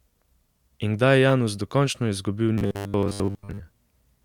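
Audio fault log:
1.30 to 1.32 s, corrupt frame decoded: a single damaged compressed frame was played as received, so misread gains and codes put energy at the wrong frequencies, peaking at about -15 dBFS, and it is heard as a brief chirp, squeak, blip or burst of noise lasting roughly one frame.
2.58 to 3.60 s, robotic sound from repeated short buffers: the audio turns into a rigid, metallic buzz fixed at 100 Hz that still loosely tracks the speech. The likely cause is late-arriving audio with the last 10 ms buffer looped in its place, so most of this span is repeats and the real audio is skipped.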